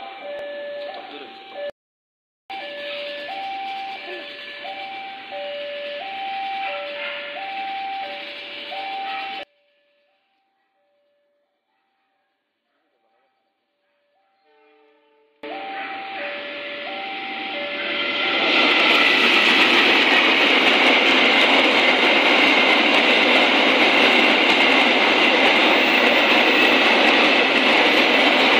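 One channel inverted, from 9.43 to 15.43 s: the sound drops by about 33 dB to a faint residue. The likely cause is one stereo channel with reversed polarity, so everything common to both channels cancels when they are summed to mono.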